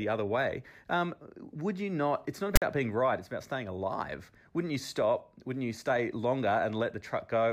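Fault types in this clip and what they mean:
File tags played as audio: from 2.56 to 2.62 s a block of tag text and its zero padding is decoded as samples, so about 60 ms of speech becomes a harsh, hard-edged rasp that cuts into dead silence. On the waveform the rasp sits lopsided, offset from the centre line because text byte values cluster on one side, then flattens to silence. A spectrogram shows a broadband vertical stripe with abrupt edges, then an empty gap.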